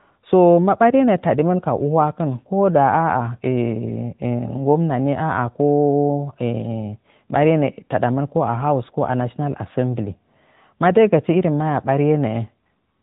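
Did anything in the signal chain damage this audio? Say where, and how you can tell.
Yes, at the codec stage: the AMR narrowband mobile codec colours the speech throughout. Nothing passes above 3.8 kHz, and the plainly audible buzzy, synthetic texture fits a mid-rate mode near 10.2 kbps. A simple low-pass filter would dull the sound without adding that vocal-tract-model buzz.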